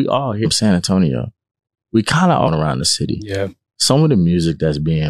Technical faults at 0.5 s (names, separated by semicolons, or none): damaged data in a compressed stream